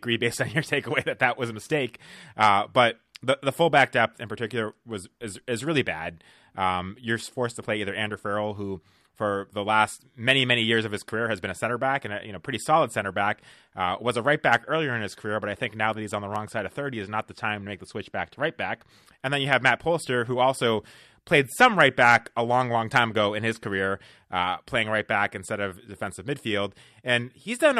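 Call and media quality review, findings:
No audible faults found in this speech recording.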